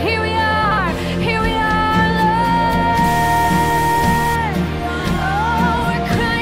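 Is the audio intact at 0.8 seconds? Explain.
No, only just. From 0.64 to 0.78 s the sound breaks into a brief garbled flutter; the last join lands right before 0.8 s. This is frames out of order: two neighbouring 64 ms runs of three frames each were decoded in swapped order, so that stretch plays with its halves exchanged and no time is lost.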